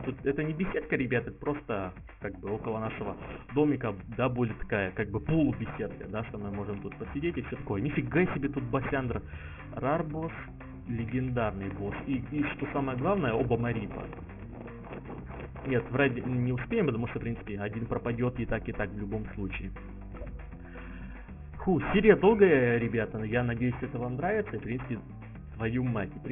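From start to finish the high end sounds gritty and metallic, with harsh tones that don't belong to the sound, and the spectrum runs hard up to about 3 kHz. This is aliasing: content above that point was folded back down at roughly 15 dB below the signal, which fits a drop to a 6 kHz rate with no filtering first.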